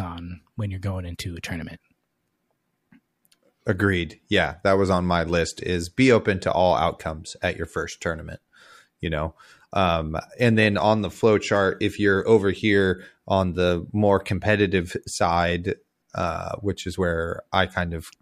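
Nothing in this speech recording stands out as a technical fault, so there's really nothing here to flag.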